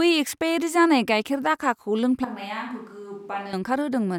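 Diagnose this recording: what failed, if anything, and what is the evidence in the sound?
A switch to a distant microphone runs from 2.25 to 3.53 s: the speech abruptly turns roomy and hollow, loses bass, drops roughly 10 dB and gains audible room noise, then snaps back. At the capture stage, the close microphone's feed likely dropped out, leaving a farther pickup.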